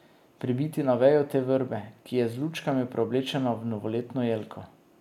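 No dropouts, clipping, glitches or other technical faults are audible anywhere in this speech recording.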